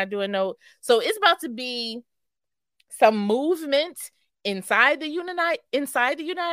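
Sample clock jitter sets in at 4.58 s and lasts to the end of the speech at 6.52 s. The converter's timing wanders by something under a microsecond, so each sample lands slightly early or late. Where the waveform changes fastest, that timing slip turns into the largest amplitude error, roughly 45 dB below the signal. It is heard as a faint grainy hiss clinging to louder and brighter sounds, dropping away in the pauses.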